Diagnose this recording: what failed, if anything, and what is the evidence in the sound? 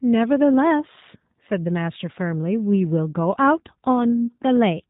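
The codec stage is the culprit: it's G.729 codec damage all the way through this speech. Nothing gets above 3.8 kHz, and there's a plainly audible rough, synthetic edge from the filter-plus-pulse rebuild, which fits an 8 kbit/s G.729A encode.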